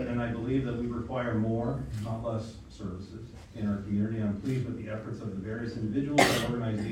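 No technical faults can be heard anywhere in the audio; the signal stays continuous and stable throughout.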